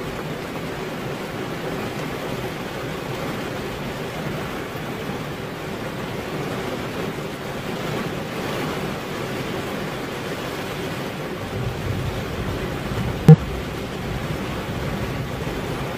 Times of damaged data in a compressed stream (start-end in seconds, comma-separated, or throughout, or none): 2.42-2.47, 13.29-13.35, 15.70-15.74